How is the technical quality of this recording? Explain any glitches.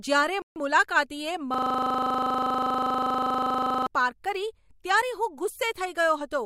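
Two glitches interrupt the speech. From 0.42 to 0.56 s, a Bluetooth stall, likely from interference holding back packets until the headphone buffer emptied, leaves about 140 ms of silence before playback resumes. From 1.54 to 3.87 s, a system hang loop froze the system while the audio hardware kept replaying one 40 ms segment, producing a rough 25 Hz buzz.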